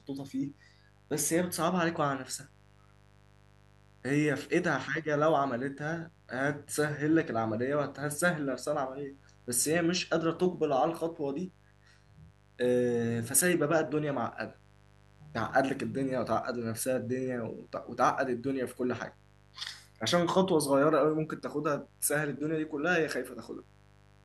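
From start to finish the speech sits over a mains buzz, a steady, raspy drone some 30 dB below the speech that never lets up in the pauses. Sharp switching spikes, twice per 50 Hz cycle, are leaking into the signal path, which points to a dimmer, rectifier or broken shielding. On a spectrogram it appears as a comb of horizontal lines spaced 50 Hz apart, climbing well into the kilohertz range. The waveform's silent stretches show a regular 100 Hz train of small spikes.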